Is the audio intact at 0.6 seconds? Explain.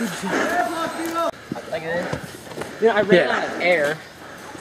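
No. At 0.60 s a run of compressed frames is skipped: a few consecutive frames never reach the output, either missing from the stream or rejected by the decoder as damaged. The audio jumps forward by around 70 ms, which fits about three frames of 26.1 ms each. Because adjacent frames overlap, the join comes out as a short smeared blip rather than a sharp click, with the sound lurching slightly ahead.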